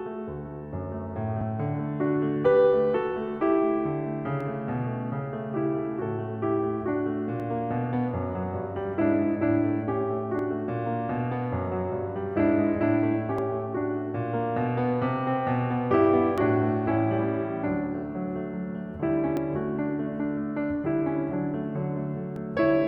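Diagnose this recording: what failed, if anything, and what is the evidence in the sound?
The music skips briefly at 1.41, 4.41, 7.40, 10.39, 13.38, 16.38, 19.37 and 22.36 s. Each gap is a few milliseconds, joined with no silence. The steady 3 s spacing points to audio missing between chunks, likely at the buffer stage during chunk handover.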